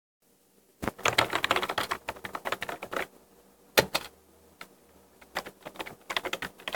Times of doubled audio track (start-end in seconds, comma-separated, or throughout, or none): none